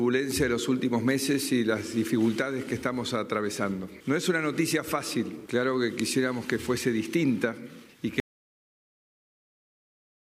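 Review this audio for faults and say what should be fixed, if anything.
An audio dropout to silence at 8.2 s cuts the sound abruptly to silence through the end, with no room tone, unlike a gate or fade. It likely comes from a lost input or stray mute. Prevent it by securing connections and monitoring input levels throughout recording.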